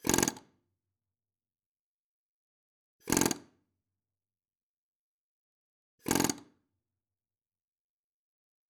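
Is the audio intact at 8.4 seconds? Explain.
Yes, at 8.4 seconds the audio is intact, with no fault at that moment.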